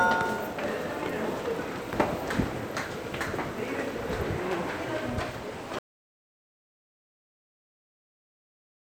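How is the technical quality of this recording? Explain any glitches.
There's one real problem here: the recording loses its input partway through and never gets it back. From about 5.79 s to the very end, the audio drops out to silence. The sound cuts off mid-flow and what follows is dead silence, with no room tone or background hiss at all. That points to the input signal vanishing, likely a disconnected source or a mute, while the recorder kept writing empty samples. Whatever was happening after that point simply isn't there.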